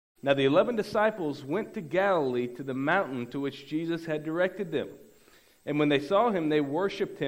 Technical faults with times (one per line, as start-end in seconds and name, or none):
none